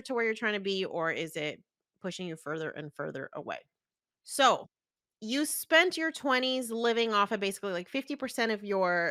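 No technical faults are present in the clip, so there is nothing to describe in time order.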